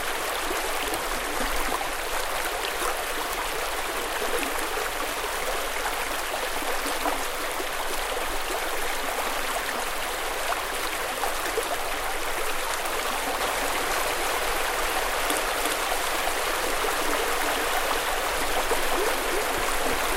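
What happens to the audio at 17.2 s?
At 17.2 s the sound is affected by a doubled audio track, which starts abruptly at 13.41 s and runs to the end of the clip. A second full-band copy trails the original by roughly 400 ms at about the same level, most likely because the audio is being captured again through a slower path. The copy has no decay or room colouring, so every event is heard twice as a distinct, dry repeat.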